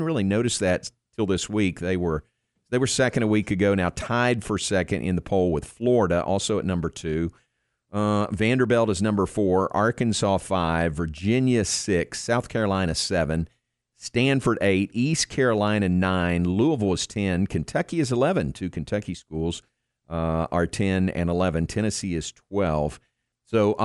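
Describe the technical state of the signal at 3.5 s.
At 3.5 s the speech signal is intact, with no audible fault at that moment.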